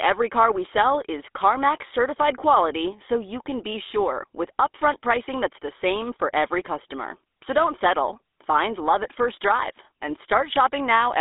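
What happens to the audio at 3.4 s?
At 3.4 s the speech carries GSM full-rate codec damage, present across the whole clip. The pulse-driven vocal-tract model, consistent with a 13 kbps rate, leaves a buzzy, gravelly roughness, with the band held to roughly 250 Hz to 3.6 kHz and nothing above 3.8 kHz.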